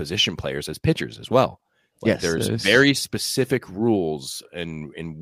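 A short speech recording with no technical faults to report. Nothing in it calls for a time or a cause.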